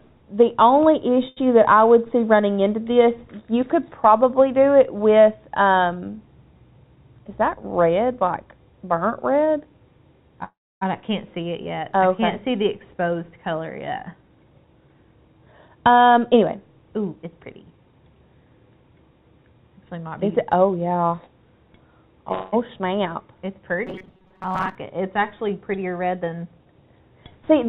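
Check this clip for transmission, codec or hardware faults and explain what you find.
Several transmission faults show up along a call path whose band stops at 4 kHz, which fits narrowband G.711 A-law.

Short stall from a late packet, at 1.28 s to 1.39 s: one sound hangs on for about 85 ms with a faint buzz or dip, then carries on with nothing skipped. A packet arrived late, the jitter buffer emptied, and the receiver stretched the last stretch of audio until the packet turned up. It then resumed from the same point, which pushed everything after it 85 ms later.

Jitter buffer speed-up, at 6.96 to 7.73 s, 14.04 to 15.98 s, 17.16 to 18.0 s and 25.92 to 26.73 s: in each passage the sound rushes ahead at an unchanged pitch, running 10 to 14 percent fast. The buffer had built up more audio than it wanted, so the receiver cut out tiny pitch-period slices again and again to catch up. The second passage loses roughly a third of a second, and the others lose about a tenth each.

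Call audio freeze, at 10.44 to 10.83 s and 22.32 to 22.54 s: the first freeze is a fading buzz or hiss continuing the last sound that drops into about 280 ms of silence before the audio resumes, adding 374 ms of delay. The second is a shorter 202 ms hold that never reaches silence. Packets were likely delayed in transit, so the buffer ran dry and filled the wait, and no audio was lost.

Robotic sound from repeated short buffers, at 23.87 to 24.75 s: the sound turns rigid and metallic, with a fixed buzz at 188 Hz laid over it that still loosely tracks the original. That pitch fits a loop of roughly 5.3 ms being replayed. Fresh audio was likely arriving too slowly, so about half of this stretch is repeats standing in for material that was skipped.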